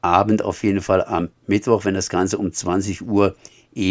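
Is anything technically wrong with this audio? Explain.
No, nothing technically wrong can be heard in this speech clip.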